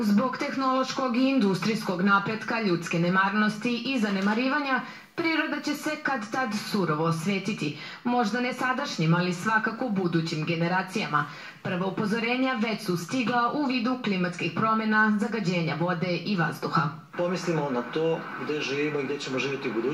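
No faults can be heard anywhere in the recording.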